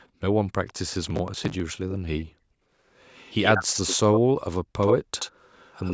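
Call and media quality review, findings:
Background gated by the echo canceller, 0.00 to 0.21 s: room tone drops out briefly, roughly 150 ms in total, about 40 dB down at its deepest. Same at 2.24 to 2.79 s, about half a second affected. Component: AEC suppression clamping the mic path while far-end playback is active. Background returns once suppression releases.

Echo leak, 0.67 to 0.73 s: short, faint delayed copy of speech, 148 ms behind, about 30 dB under the talker. Likely cause: far-end loudspeaker pickup not fully cancelled by that side's AEC and returned.

Echo leak, 3.06 to 3.97 s: stronger repeat at 78 ms delay, about 5 dB below speech.

Echo leak, 4.81 to 4.97 s: 78 ms delay, at roughly the same level as the speech itself.

Echo leak, 5.19 s to end of clip: 78 ms delay, about 15 dB down.

Processor overload crackle, 1.03 to 1.60 s: gritty tearing burst over the speech, stopping once the load passes. 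Mechanism: repeated missed audio deadlines, with each late buffer skipped rather than held, leaving hard-edged gaps. The texture fits buffers of around 5 ms, around 30 missed across the stretch. Component: audio processing thread starved of CPU.

Mic-path high-pass and band limit, with nothing above 8 kHz, are as expected for call processing.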